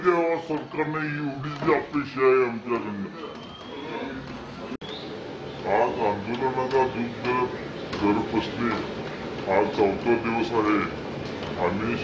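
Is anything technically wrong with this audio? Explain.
Yes. Throughout, everything sounds slow and low, running at two-thirds speed and about 7 semitones down: a wrong sample rate, which fits 24 kHz audio played back at 16 kHz.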